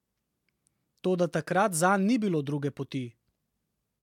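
No technical faults are audible anywhere in the recording.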